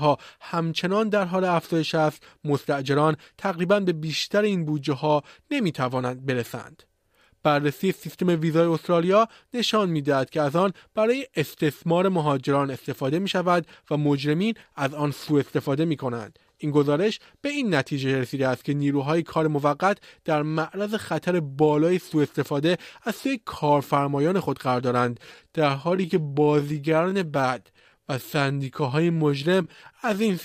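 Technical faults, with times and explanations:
25.04–30.44 s, time-stretched section: speech abruptly slows to 0.74× speed at unchanged pitch, dragging, likely from software repeating short pieces to lengthen it.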